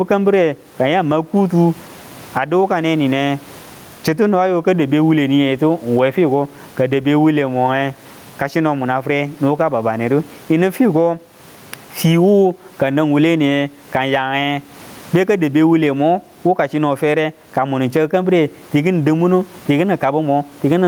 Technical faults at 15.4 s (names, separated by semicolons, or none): gain pumping